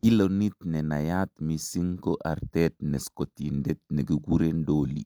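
Nothing goes wrong anywhere in this speech recording; there's just nothing here to flag.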